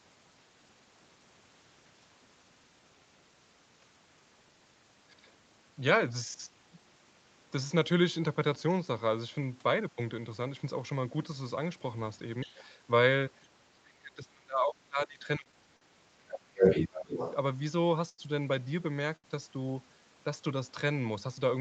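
A speech recording carried over a call shows three kinds of fault. The other side's voice leaking through appears twice. From 12.41 to 12.64 s it is a faint scrap, about 20 dB below the talker. From 16.28 to 17.34 s it is stronger, about 5 dB above the talker. The likely cause is a loudspeaker playing the far end into the microphone, with the echo canceller leaving residue behind. Speech suppressed in double talk appears four times. A brief dip of roughly 10 dB hits 12.45 to 12.49 s. The heaviest loss runs from 13.68 to 16.19 s. There the talker falls by up to roughly 30 dB for around two seconds. Two further drops of roughly 15 dB occur at 16.55 to 16.65 s and 16.88 to 17.13 s. The likely cause is the canceller failing to separate the talker from the echo and attenuating both. Short stalls from late packets hold the sound too long at four points. They last 23 ms at 15.43 s, 43 ms at 15.77 s, 89 ms at 18.09 s and 75 ms at 19.16 s. 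Nothing is lost. The receiver likely stretched the last audio while its jitter buffer sat empty, then resumed. Each stall adds that much delay. Throughout, content stops near 8 kHz, which fits an Opus call path at about 24 kbps.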